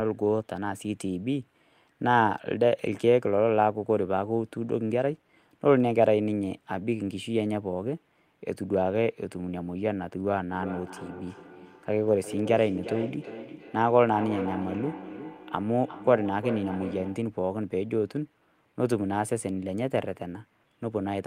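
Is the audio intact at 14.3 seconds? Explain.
No, 14.3 s sits inside feedback echo between two devices (10.51 to 17.36 s): one device replays the other's microphone, so speech returns roughly every 400 ms, peaking about 11 dB below the speech.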